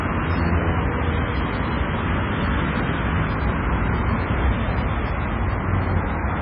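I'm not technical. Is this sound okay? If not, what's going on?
No. Throughout the clip the sound is dull, with nothing above about 5.3 kHz, and has a watery, swirling quality, likely from heavy MP3 compression. Plain muffling would only dull the sound. The swirl comes from faint details flickering on and off.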